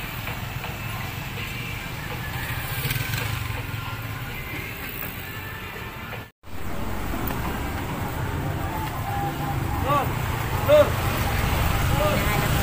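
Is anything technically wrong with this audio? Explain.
No, nothing technically wrong is audible here.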